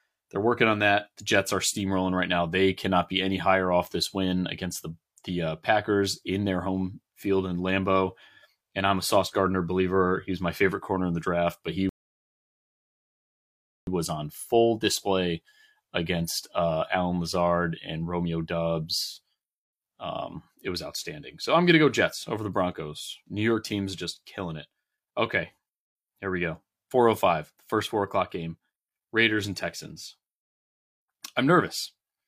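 A speech clip with one rebuffering stall: right after "the draft but he" at 11.89 s, the sound drops to silence until 13.87 s, then picks up cleanly with "was on full display". The player ran dry and waited for more data, so nothing's missing, just about 2 s of dead air added.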